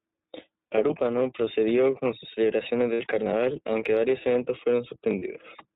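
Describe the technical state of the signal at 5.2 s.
At 5.2 s, right after "carnaval aunque varios eventos", there are lost iLBC frames from 5.19 to 5.23 s, a gap of about 30 ms that fits a single dropped 30 ms frame. The decoder fills it by repeating the last pitch cycle blended with noise, so the gap sounds like a brief held, faintly buzzy vowel rather than silence or a click. Because each iLBC frame is coded independently, the sound snaps back cleanly at once, with no smeared recovery afterwards.

This moment also carries the iLBC codec damage present across the clip. The audio is band-limited to 4 kHz, and the excitation coding gives it a plainly rough, synthetic edge, which fits the 13.33 kbps mode. That steady narrowband graininess sets it apart from a wider-band codec's swirly or watery artefacts.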